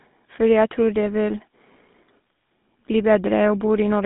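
From start to finish the speech carries GSM full-rate codec damage. Its coarse pulse-excited vocal-tract model gives a plainly buzzy, gravelly roughness, consistent with a 13 kbps stream. A spectrogram shows energy confined between 150 Hz and 3.7 kHz, with smeared, grainy harmonics.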